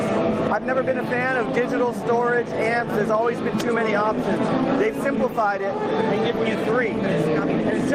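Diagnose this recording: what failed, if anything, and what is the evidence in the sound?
Input gain was likely set far too high at the microphone stage, with a fast limiter or compressor pulling it back on every loud sound. Throughout the clip, the level swings by about 10 dB, ducking under loud moments and swelling back between them. This gain pumping squashes loud and soft parts closer together.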